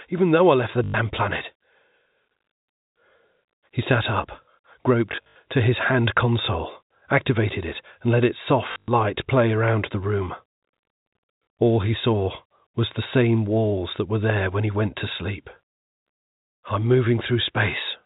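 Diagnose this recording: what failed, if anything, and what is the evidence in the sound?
The network stage failed: packet loss with last packet repeated. At 0.84 to 0.94 s, after "though I left the", 100 ms is lost. From 5.12 to 5.36 s, before "to his hand console", 160 ms drops in scattered gaps, the longest 80 ms. At 8.72 to 8.88 s, between "it and let its" and "play around the room", 140 ms goes. The receiver replays the last packet. Runs buzz near 50 Hz, which fits 20 ms packets. The result is a brief robotic stutter.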